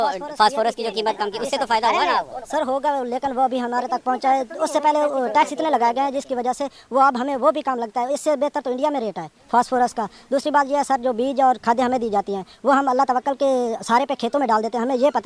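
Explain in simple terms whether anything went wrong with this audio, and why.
A wrong sample rate runs the whole way through: sound plays about 1.38 times too fast and about 5.6 semitones high, which fits 16 kHz audio played at 22 kHz.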